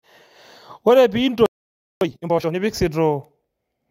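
At 1.46 s the speech stops dead mid-flow and stays silent for about 0.55 s, until 2.01 s. This is a playback stall, likely the player running short of data or its thread being blocked.

From 2.01 to 2.55 s comes time-compressed catch-up. The player clears its backlog by cutting out short slices and cross-fading the remainder, so the speech runs at twice normal speed. The pitch stays normal, which is what separates this from a simple sped-up replay.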